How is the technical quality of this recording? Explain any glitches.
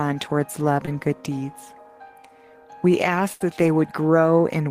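Two packet-loss glitches interrupt the recording.

From 0.85 to 0.89 s there is a short concealed packet loss. About 20 ms of audio never arrived in time, and the receiver covered roughly 16 ms of it by extending the preceding sound, imitating its pitch if it had one or substituting shaped noise if not, before crossfading into the real signal. The result is a brief smear or wobble, and any very short sound in that window may be lost.

From 3.33 to 3.42 s a burst of packet loss removes about 80 ms of audio. The receiver sustained the last sound for roughly 73 ms while lowering its level, which produces a held buzz or a fading hiss depending on what preceded the gap. Playback then picks up further along, and whatever fell inside the gap is gone rather than delayed.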